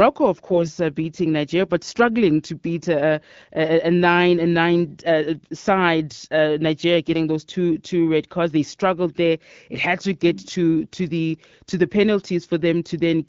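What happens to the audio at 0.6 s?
From 0.48 to 0.70 s, just before "uh beating", AMR bit errors hit a short run of frames at a bit error rate of a few percent. The flipped, less protected bits misplace excitation pulses and skew the finer parameters, so the speech turns hoarse, scratchy and gargly. Unlike lost-frame concealment, pitch and loudness hold steady instead of fading or repeating.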